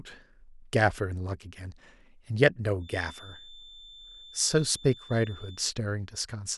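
From 2.78 s to 5.68 s, a thin, steady whistle at 3.5 kHz sits behind the speech, well below its level and swelling and fading slowly as it holds. This is a feedback whistle, most likely caused by sound from a loudspeaker reaching the microphone and being amplified again, with the loop poised right at the edge of feedback. That single high tone keeps ringing without building up, until it drops away at 5.68 s.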